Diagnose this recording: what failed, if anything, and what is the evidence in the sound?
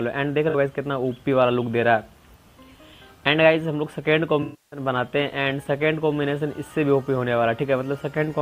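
The codec stage failed, with AAC frame loss and concealment. At 0.49 s, a patch of about 43 ms turns smeared and noisy. That fits two lost frames. From 4.42 to 4.80 s, a longer stretch of about 300 ms decays toward silence and then fades back in. That fits roughly fourteen lost frames. The decoder rebuilt each gap from the last good spectrum with scrambled signs or interpolated energy. It faded that fill as the loss went on.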